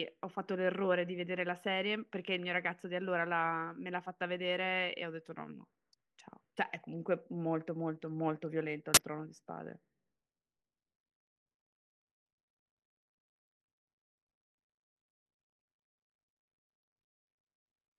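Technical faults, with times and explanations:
8.94–8.97 s, file tags played as audio: a hard-edged 27 ms burst of very loud white noise, the compressed bytes of an embedded cover picture read as samples. Unlike a click or dropout, it is a flat block of static rather than a spike or gap.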